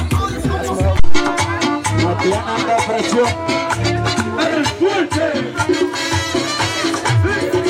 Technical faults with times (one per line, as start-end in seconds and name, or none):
0.99-1.26 phantom power thump